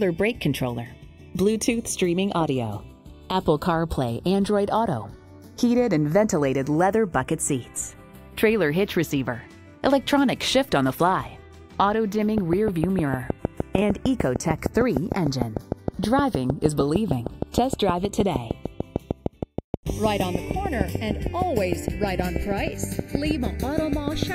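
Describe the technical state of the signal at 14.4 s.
At 14.4 s a train of clicks ticks steadily over the sound at about 6.5 per second, evenly spaced and much the same shape each time. The clicks peak well above the sound itself and continue through pauses. The train runs from 12.38 s to 24.24 s, about seventy clicks in all. The likely cause is interference from nearby equipment or a faulty connection or power supply injecting pulses into the signal.

Underneath, a slow flanging sweep is present at this moment and across the whole clip. This is the channels drifting apart. The two channels appear to come from devices running on separate clocks that disagree by roughly 40 ppm, so the delay between them creeps upward, reaching around half a millisecond by the end. When the channels are summed to mono, that sliding delay drags comb-filter notches gradually through the spectrum.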